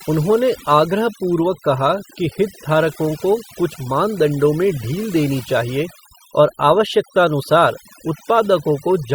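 From the first moment to the last, the speech carries the marks of overdone noise removal. The reduction was pushed too hard, so individual frequency bands sitting near the tool's noise estimate got pulled way down or switched off, and the softer parts of the voice went along with them. You hear it as a near-silent background dotted with twinkling specks.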